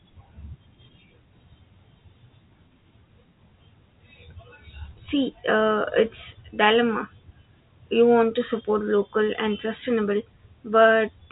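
The speech arrives over a G.711 telephone channel that carries nothing above 3.8 kHz, and no technical fault is present anywhere in it.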